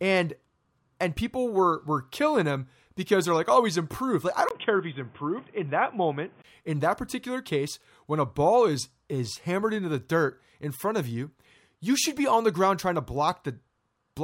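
From 4.49 to 6.44 s the speech turns dull, capped near 3.5 kHz, after a brief dropout at 4.49 s, with new noise about 30 dB down, likely an input switched to a poorer device.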